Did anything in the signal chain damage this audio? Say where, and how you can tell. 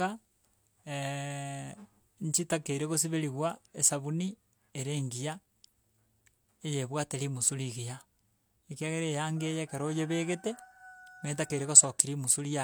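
No, nothing stood out on listening to this speech recording.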